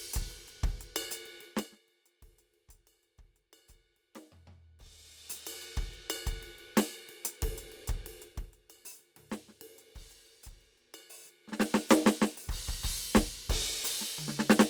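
At 1.44 s the music's level drops by roughly 25 dB over about 0.37 s, ending at 1.81 s. The drop comes in 2 dB jumps at around thirty per second instead of a continuous slide, and each jump leaves a small click. That gives zipper noise, a fast ticking laid over the music. The same zipping comes back from 8.22 to 8.55 s on a drop of about 15 dB, and again from 11.42 to 11.75 s when the level rises by about 15 dB. Those two run at roughly twenty steps per second. What sets this apart from a plain fade is the stepped texture. A smooth level change glides without adding anything, while here the ticking lasts exactly as long as the level is moving and stops once it settles.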